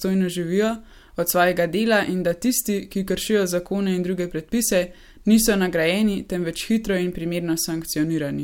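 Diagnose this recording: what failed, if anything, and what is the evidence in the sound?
No fault detected in this recording.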